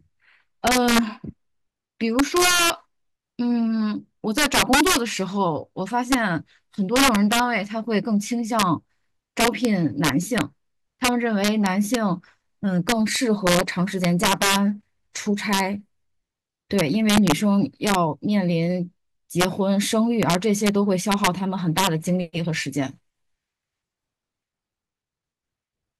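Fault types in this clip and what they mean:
integer overflow: Somewhere in the chain a sum or gain stage pushed the speech about 7 dB past the largest value the integer format can hold, and instead of being held at the limit the samples wrapped around to the opposite extreme. Well under one percent of samples go over, but each of those peaks jumps across the full range, so the loudest syllables throughout the clip break into sudden, violent cracks, far harsher than ordinary clipping.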